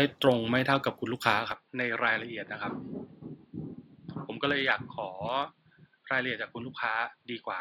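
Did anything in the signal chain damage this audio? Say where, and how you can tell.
Yes. At 1.52 s the speech abruptly turns dull and boxy, and it stays that way to the end. There is no gap at the change. From that point nothing reaches above 4.9 kHz. The level falls by about 5 dB, and a new background noise sits roughly 40 dB under the speech. This happens at the capture stage. The likely cause is an input switched to a poorer device, a narrower-band microphone with its own tone, gain and noise floor.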